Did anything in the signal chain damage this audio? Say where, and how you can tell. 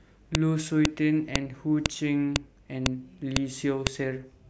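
Yes. A file header played as audio causes sharp, loud clicks in this speech at 0.35, 0.85, 1.36, 1.86, 2.36, 2.86, 3.36 and 3.87 s, spaced every half second regardless of what the speech is doing. The fault lies at the storage or streaming stage, where half-second WAV pieces were joined without removing each piece's header. Those few dozen bytes are then read as samples, producing a brief burst at every join.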